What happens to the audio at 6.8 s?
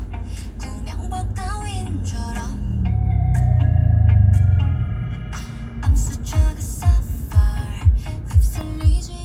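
Nothing goes wrong at 6.8 s; the audio runs through that moment intact, with no dropout, click, distortion or other fault to be heard.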